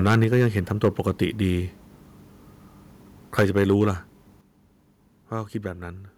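Harsh, crackling distortion rides the loudest speech peaks from 0.06 to 0.46 s, 0.84 to 0.88 s and 3.38 to 3.73 s. This is microphone overload, likely from an input volume set too high. The first and third spans drive peaks about 8 dB past the converter's limit, and the second about 3 dB, so the tops are sheared flat.

Speech and background drop abruptly in level at 0.24 s (about 3 dB), 3.42 s (about 4 dB) and 4.41 s (about 7 dB). Each is a microphone volume stepped down, likely the call software cutting the device's input gain in a single step after sensing clipping.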